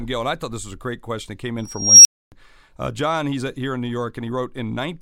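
At 1.58 s an unstable filter diverges: a tone near 5 kHz swells over 0.47 s, clips, then overflow silences output until 2.32 s.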